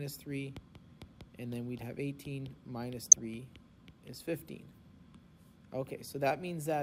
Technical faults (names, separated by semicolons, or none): DAB burbling